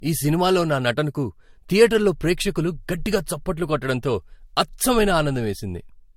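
Transcoding between lossy codecs runs throughout the speech. Nothing remains above 16.6 kHz, and two layers of coding artefacts are heard together. This likely comes from an MP3 encode re-encoded to Vorbis at modest rates, 66 and 59 kbit/s, with Vorbis spending bits on MP3's damage.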